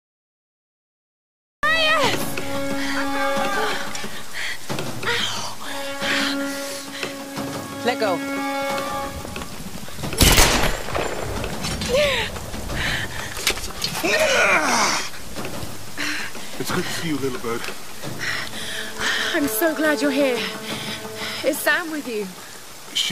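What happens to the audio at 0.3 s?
The recording began late, a cut-off start, so from 0 to 1.63 s there is only digital silence before sound appears abruptly mid-event with no natural attack.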